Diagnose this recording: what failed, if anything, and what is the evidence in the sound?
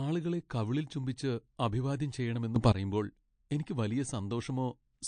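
Codec stage: throughout the speech there are plainly audible watery, swirling artefacts and no content above 9.5 kHz, which fits likely MP3 compression at a low bitrate of around 48 kbps. Unlike a simple low-pass filter, weak frequency lines switch on and off from frame to frame, so the damage keeps shifting.

Sudden gain jump in the digital gain stage: just after "കവിളിൽ ചുംബിച്ച് അഭിവാദ്യം ചെയ്യണമെന്ന്", the level steps up by about 12 dB from 2.56 s to 2.72 s, with speech and background noise rising together. A talker moving closer would not lift the noise floor, and an automatic gain control ramps smoothly. Here the change is instant, likely a gain setting applied without a ramp.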